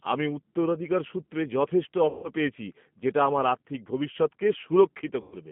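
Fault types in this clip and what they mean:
G.729 codec: The speech sounds slightly rough and synthetic throughout, and the damage is plainly audible. The audio is confined to a narrow telephone band of roughly 150 Hz to 3.4 kHz, with nothing above it. The sound is not stored as a waveform. It is rebuilt from a vocal tract filter, a pitch predictor and a handful of pulses per short frame, which fits an 8 kbit/s G.729A encoder.
VoIP packet loss concealed by the speech codec: From 2.09 to 2.29 s, between "আমি উত্তরাধিকার সূত্রে যথেষ্ট" and "পেয়েছি যেটা আমার আর্থিক", the speech smears into a buzzy tone or coloured noise that fades, and it does so again from 5.21 to 5.36 s. Packets went missing, about 150 ms and then 110 ms of audio. The decoder filled each gap by repeating its last pitch and filter while lowering the gain. Because each frame builds on the one before, the sound stays weak for a short while after the packets return.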